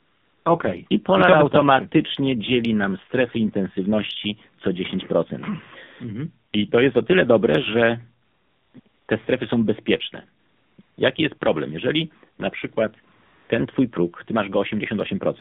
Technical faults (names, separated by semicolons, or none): AMR narrowband mobile codec; AMR comfort noise